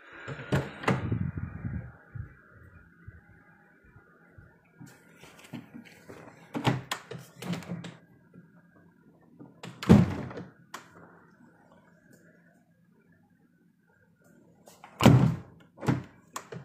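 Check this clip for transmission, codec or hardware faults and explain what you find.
One fault is present. At 7.94 to 7.99 s there is damaged data in the compressed stream: corrupted bytes make the decoder misread the frames and resynchronise, producing a brief 50 ms glitch.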